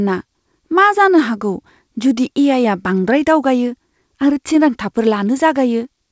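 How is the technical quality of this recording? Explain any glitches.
No glitches turn up anywhere in this speech recording, and the only thing of note is the ordinary sound of a call line, with nothing above about 8 kHz, which fits a wideband codec such as G.722.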